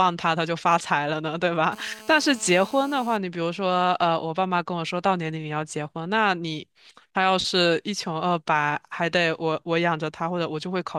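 From 1.73 to 3.17 s, a nearby 2G phone's 217 Hz transmit bursts get rectified in the audio path, causing GSM phone buzz: a steady, harmonic-rich rasp about 21 dB below the speech.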